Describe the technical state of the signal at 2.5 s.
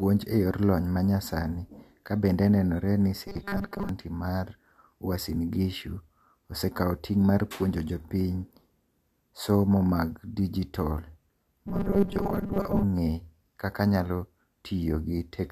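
No fault is present at 2.5 s; the speech signal is intact at that moment.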